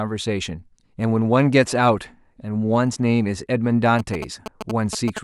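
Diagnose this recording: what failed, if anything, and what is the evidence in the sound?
Interference from GSM signalling bursts enters at the analogue wiring stage, from 3.99 s to 5.19 s. The speech is overlaid with a galloping dit-dit-dit of short buzzes at about 217 Hz, some ten decibels below the speech. A nearby 2G handset is transmitting brief groups of radio bursts while signalling, and an analogue input or cable run demodulates them, turning the TDMA frame rate into audible buzz.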